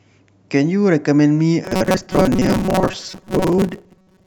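From 1.65 s to the end of the clip, the speech collapses into a rigid, metallic buzz pitched at 188 Hz that still roughly tracks the syllables: robotic sound from repeated short buffers. The likely cause is new audio reaching the playback side too seldom, so a short fragment of about 5.3 ms is looped to fill the gaps, and roughly half of what is heard is repetition while the real speech in between is skipped.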